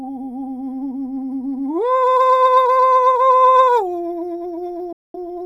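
At 4.93 s the music drops out abruptly and stays silent until 5.15 s, a digital broadcast dropout. The receiver stopped getting decodable frames and muted, so about 213 ms of programme is simply gone, a gap that fits roughly five lost frames. The fade into silence takes only about 3 ms, so it sounds like a hard cut. A waveform shows a flat line, and a spectrogram shows a clean vertical blank across all frequencies before the music resumes.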